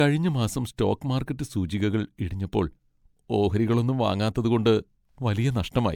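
From start to finish the speech carries a swirly, hollow smear, with consonant attacks blurred and nothing above 19.9 kHz. That band limit fits a 128 kbit/s MP3, yet the damage is heavier than one encode at that rate would leave, which sets it apart from plain low-bitrate coding. The likely cause is generation loss: around seven decode-and-re-encode passes, each quantising on a shifted frame grid so noise and spectral holes pile up.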